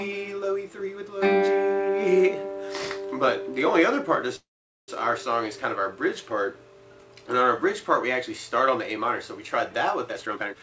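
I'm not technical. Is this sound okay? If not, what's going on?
No. At 4.36 to 4.90 s there is a call audio freeze. The incoming data was likely held up on the network, so the receiver's waiting store of audio ran out. It briefly stretched the last sound, then went quiet for about 0.45 s, and the audio picked up exactly where it had stopped. Nothing is lost, but a gap of about half a second is inserted and everything after it arrives later.

From 10.09 s to the end there is a jitter buffer speed-up. The receiver had built up more waiting audio than it wanted, so it repeatedly cut out tiny slices, about 0.4 s in total, to catch up. The pitch stays the same, but the last half-second plays at roughly 166% speed and sounds clearly rushed.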